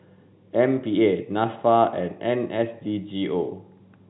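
No technical faults can be heard in the speech, which has the narrow band of a G.711 A-law telephone line at 64 kbps, with nothing above 4 kHz and at most a faint trace of that coding's quantisation noise.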